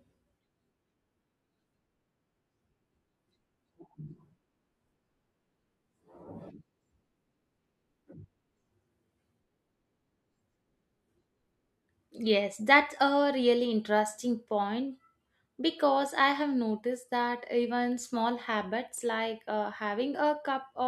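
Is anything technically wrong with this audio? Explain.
Yes. At 16.20 s in this speech there is an underrun with held sample: the output buffer briefly ran dry, so the converter held its last value for about 0.45 ms. Since nothing was lost, playback resumes where it stopped and the end is soft; the waveform shows a tiny flat step and the spectrogram barely a faint vertical line.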